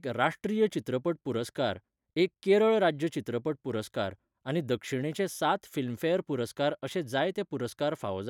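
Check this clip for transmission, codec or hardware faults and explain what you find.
No transmission, codec or hardware faults are audible anywhere in this speech recording.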